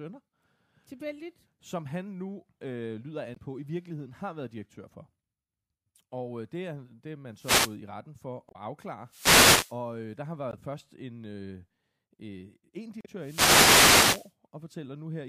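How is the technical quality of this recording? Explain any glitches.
The recording is marred by two kinds of repeated glitch: brief digital blips from damaged compressed data, and bursts of radio static from a wireless microphone.

Damaged data in a compressed stream shows up at 3.33–3.38, 8.48–8.56, 10.50–10.54 and 13.01–13.06 s, the last right after "en øh øh en". Corrupted bytes make the decoder misread frames and hunt for sync, producing short digital blips. On a spectrogram each appears as a narrow vertical smear of garbled energy; on the waveform it is an abrupt discontinuity.

Wireless microphone noise hits occur at 7.34–7.78 s, between "er det er man" and "i retten", at 9.06–9.78 s, and at 13.19–14.33 s. Multipath reflections cancel the FM signal, so receiver noise rises over the speech as a swish of static. A spectrogram shows broadband hiss filling the gaps between harmonics, and the waveform gains a fuzzy noise floor.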